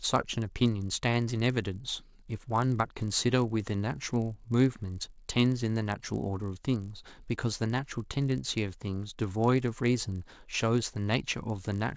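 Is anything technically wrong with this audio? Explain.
Yes. Throughout this speech clip there is a resampler restarted on every block. Each 20 ms block was converted separately, apparently from 44.1 kHz down to 16 kHz, so every block edge carries a small error. The result is a 50 Hz buzz that is present only while speech is sounding.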